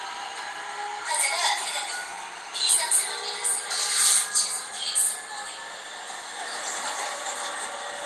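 No technical faults are audible.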